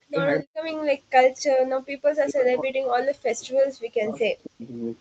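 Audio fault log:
0.06–0.15 s and 0.42–0.75 s, speech suppressed in double talk: the speech dips by about 40 dB, roughly 0.1 s and then 0.3 s, likely because the echo canceller confused it with loudspeaker echo during simultaneous talk. The talker's own speech drops, not merely the room behind it.
1.03–1.13 s and 1.82–1.96 s, background gated by the echo canceller: the room sound drops by about 39 dB, then about 40 dB, for roughly 0.1 s and 0.15 s while the loudspeaker plays, then returns. The ambience gaps, unlike the double-talk dips in the speech itself.
2.24–3.82 s and 4.02–4.66 s, speech suppressed in double talk: the speech falls by about 40 dB over roughly 1.5 s, then 0.5 s, likely from the canceller ducking both sides at once. These long spans suppress the speech, whereas gating empties the background for brief moments.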